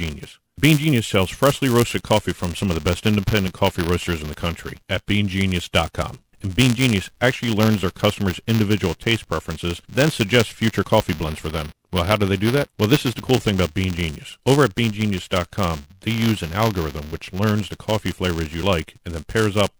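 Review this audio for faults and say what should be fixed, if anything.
Buffer tearing throughout: a steady 200 Hz robotic rattle under the speech, as each 5 ms buffer period splices in a small slice of audio about 10 ms old. Prevent it by keeping the application's write pointer safely ahead of the hardware read pointer, with enough buffer headroom.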